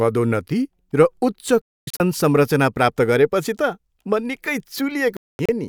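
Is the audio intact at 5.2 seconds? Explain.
No. A digital broadcast dropout runs from 5.17 to 5.49 s: the receiver lost valid frames and muted until good ones returned. The speech falls silent in short holes totalling about 256 ms, the longest lasting 224 ms, and what was sent meanwhile is gone.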